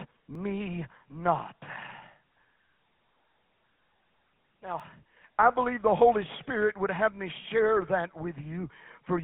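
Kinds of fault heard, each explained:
GSM full-rate codec: The whole clip has gone through the old GSM full-rate speech coder. It models the vocal tract and drives it with a thinned-out pulse train, which gives the speech that buzzy, gravelly edge. The band is squeezed to roughly 200 Hz to 3.5 kHz with nothing above 4 kHz, so it sounds dull and phone-like. The damage is plainly audible, about what you'd expect at around 13 kbps.
Dropped buffer (overrun): There are two tiny jumps in the sound, at 0.35 s and 4.80 s. No gap opens up. The audio just skips forward a hair, under a couple of milliseconds each time, and the two sides butt together. That's most likely an overrun, where the software didn't read its samples before the hardware wrote over them, so that slice was lost and the edges were spliced directly.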